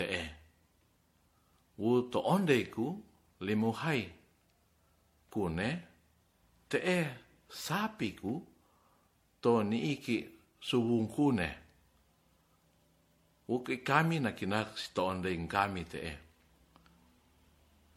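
Throughout, the speech sounds swirly and hollow, with blurred attacks and nothing above 16.5 kHz, worse than one MP3 pass at about 64 kbit/s would explain. This is likely generation loss from around five re-encodes.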